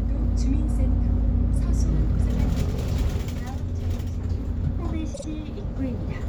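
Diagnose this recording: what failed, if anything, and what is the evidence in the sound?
A short stutter at 5.14 s: a 52 ms slice of the sound plays again twice, through 5.24 s. These are repeated frames at the codec or storage stage: a run of compressed frames was written more than once, which lengthens the audio by about 105 ms.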